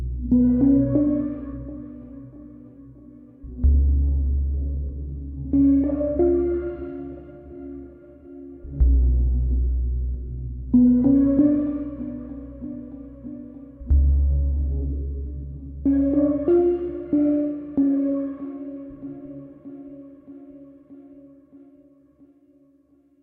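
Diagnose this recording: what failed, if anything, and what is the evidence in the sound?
Nothing in these everyday sounds points to a failure at any stage of the chain. No event in the audio calls for a diagnosis.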